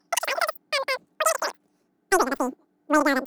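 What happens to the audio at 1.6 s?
At 1.6 s the speech is squeaky and hurried, about 19 semitones high and three times too fast, as it is for the whole clip. This is a wrong sample rate: the samples play back unconverted at triple speed, which fits 16 kHz audio played at 48 kHz.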